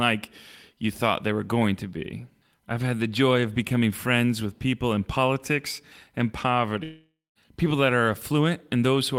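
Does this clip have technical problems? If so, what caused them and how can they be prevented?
Yes. A long network dropout, likely from packets failing to arrive, cuts the stream from 6.83 to 7.38 s. Right after "people in politics and", the receiver has nothing new to play, so it stretches the last sound into a buzzing hiss that fades away and leaves about 0.21 s of silence. The speech returns at "people that are", with roughly half a second of the original permanently lost. Prevent it with a stable, uncongested connection, a larger jitter buffer, and forward error correction or retransmission.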